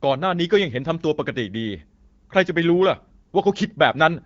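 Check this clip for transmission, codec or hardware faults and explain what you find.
Nothing stood out on listening to this speech clip.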